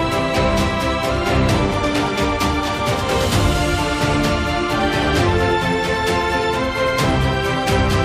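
No technical faults can be heard anywhere here.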